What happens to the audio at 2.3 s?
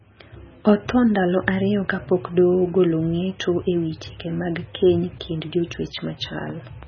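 At 2.3 s the speech carries MP3 compression, likely, present throughout: nothing above 6.6 kHz, and weak spectral lines flicker between frames, giving a watery, swirly sound with chirpy s sounds, consistent with roughly 16 kbps.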